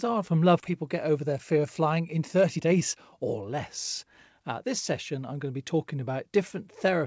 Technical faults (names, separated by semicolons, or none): skip ahead; jitter buffer speed-up